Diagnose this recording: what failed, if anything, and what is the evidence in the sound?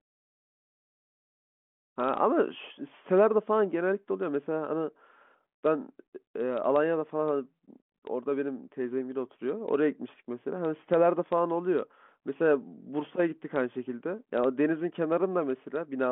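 Nothing has failed here: the speech simply carries the character of an ordinary G.726 ADPCM telephone path at 40 kbit/s, with the band running from about 200 Hz to 3.4 kHz and nothing above about 3.8 kHz, which is just how that channel sounds.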